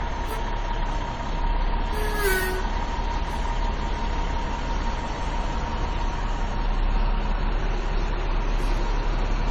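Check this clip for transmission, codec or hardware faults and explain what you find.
One codec fault runs through the whole recording. Generation loss is audible from start to finish: the sound is swirly, hollow and smeared, and transients have soft, blurred attacks. The likely cause is repeated lossy re-encoding, around seven passes of AAC-LC at a rate that fits 64 kbit/s. Each pass quantises on a shifted frame grid, so noise and spectral gaps compound beyond what that bitrate alone would produce.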